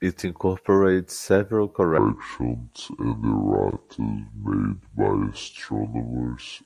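From 1.98 s, after "incorporates several", to the end, a wrong sample rate plays 48 kHz audio at 32 kHz, slowing the speech to two-thirds speed, seven semitones lower.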